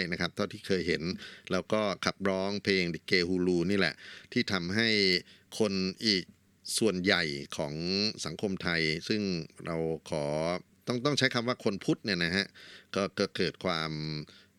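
No technical faults can be heard anywhere in this speech recording.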